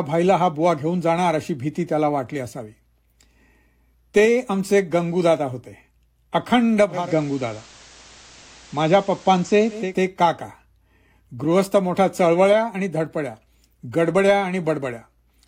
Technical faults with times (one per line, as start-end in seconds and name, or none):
6.88-9.98 digital radio blending to analogue